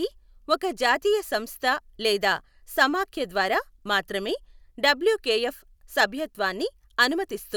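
No technical faults can be heard anywhere in this speech recording.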